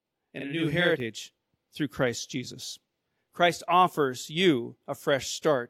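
From the start to 1.0 s, the speech has a hard doubled quality, each syllable followed by a separate copy at equal level about 46 ms later, close to a short slap echo. This is channel delay (doubling): one channel arrives late by a whole buffer, which fits a 2048-sample buffer, and when the two channels are summed to mono, the late copy sits beside the original instead of blending with it.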